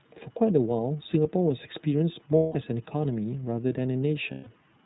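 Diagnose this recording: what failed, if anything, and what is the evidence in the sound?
Codec stage: iLBC codec coding, plainly audible as rough, synthetic speech; the spectrogram shows nothing above 4 kHz throughout, consistent with 30 ms narrowband frames.

Network stage: lost iLBC frames at 2.37–2.55 s and 4.31–4.48 s, heard as held buzzy vowels; the waveform shows repeated pitch cycles fading, consistent with several consecutive missing 30 ms packets.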